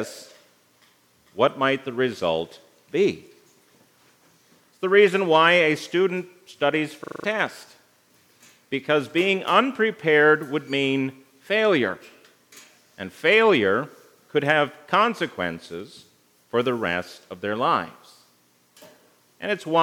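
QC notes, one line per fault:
7.04 to 7.24 s, system hang loop: the audio sticks on one 40 ms slice and replays it exactly five times, so you get a quick rattling stutter repeating at 25 Hz. That's the playback side freezing while the sound hardware keeps cycling the same stale chunk of its ring buffer. The sound that should have played there, about a fifth of a second, never comes through.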